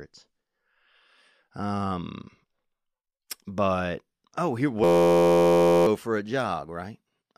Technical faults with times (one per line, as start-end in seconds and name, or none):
4.84-5.86 system hang loop